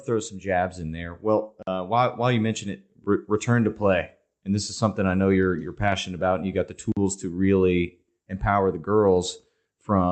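Blocks of digital silence cut this speech clip at 1.63 s, just before "while while you mention", and at 6.92 s, between "and you got the" and "to really empower the". Each hole lasts about 46 ms, which fits an unfilled 2048-sample output buffer.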